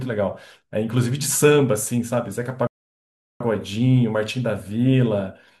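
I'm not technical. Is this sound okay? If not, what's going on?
No. At 2.67 s the speech cuts to silence and picks up again at 3.41 s, exactly where it left off. This is a rebuffering stall: playback ran out of downloaded audio and waited for more. Nothing is missing, but about 0.73 s of dead air is added.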